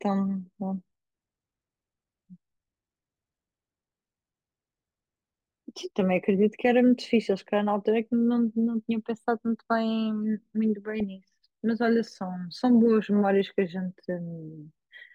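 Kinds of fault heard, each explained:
Sample clock jitter: The converter's sampling clock wanders, so each sample is taken a little early or late at random, on the order of a microsecond. The resulting error scales with how steeply the waveform is changing. It adds a fine hiss or roughness sitting roughly 50 dB below the speech, strongest on loud passages and sibilant, high-frequency sounds, and dropping away entirely in the pauses, across the whole clip.
DAB burbling: Weak digital radio reception lets bit errors slip past error correction into the MP2 audio data, at a rate of roughly 0.15 percent. Corrupted samples put short blips of noise in single sub-bands, and corrupted scale factors make sub-bands jump in level for up to a frame. At 11.00 s this produces a brief burst of burbling, with five frames damaged.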